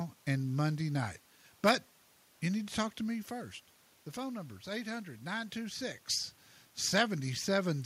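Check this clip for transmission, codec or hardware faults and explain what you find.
No transmission, codec or hardware faults turn up in this speech recording. There is background noise from the room, and the voice's level shifts around two and a half and again near five and a half seconds, as when a talker moves relative to the microphone.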